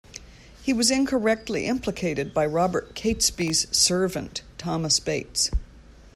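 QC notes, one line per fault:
3.38 to 3.50 s, processor overload crackle: a short gritty tear across the speech where the processor fell behind on its very short buffers, around a millisecond and a half each. Roughly seven missed across that stretch and replayed stale audio, each with hard edges, hence the crackle.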